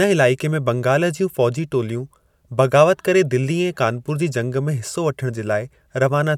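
Speech recording with no audible technical faults anywhere.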